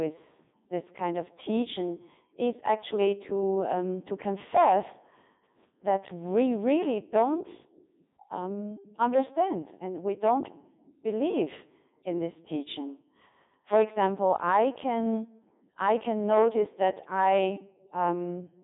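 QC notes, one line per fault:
Throughout: Codec 2 vocoder. The speech has a robotic, buzzy tone because the decoder rebuilds it from sine waves driven by pitch, voicing, energy and a spectral envelope, so the original waveform is lost. The damage is heavy, even at the 3.2 kbit/s mode. Audio sits roughly 150 Hz to 3.7 kHz, with nothing above 3.8 kHz. Unlike a plain telephone band limit, the timbre itself is synthetic, not merely muffled.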